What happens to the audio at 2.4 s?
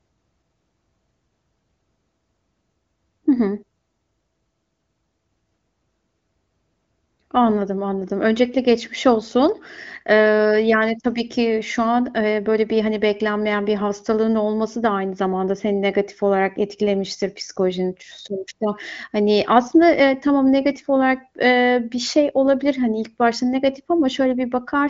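Nothing goes wrong at 2.4 s: the speech there comes through intact, with only the expected upper limit of the wideband AMR-WB path, which carries nothing above about 7.5 kHz.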